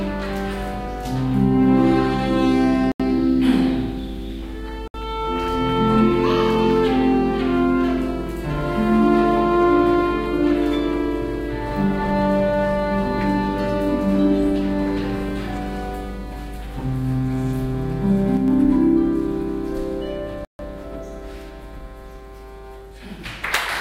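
At 2.92 to 3.00 s, 4.88 to 4.94 s and 20.45 to 20.59 s the sound cuts to dead silence for 79, 65 and 143 ms, then resumes. These are Bluetooth stalls, likely caused by interference delaying packets until the headphone buffer ran dry. Unlike concealed packet loss, the gaps are true silence rather than smeared or repeated fill.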